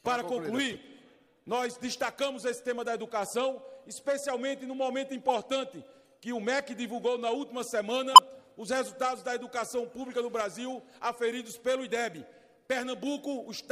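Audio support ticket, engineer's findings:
Corrupt frame decoded, three hits: 0.70–0.76 s, 5.28–5.35 s, 8.12–8.19 s. Decoder stage played damaged frames (bit errors in gain/spectral codes) instead of concealing them. Misplaced spectral energy heard as short chirp/noise blips, each spanning a couple of frames, the middle one about three. Error level climbs across the clip: about -25 dBFS at 0.70 s, about -15 dBFS at 5.28 s, about -5 dBFS at 8.12 s. Check channel error detection and concealment.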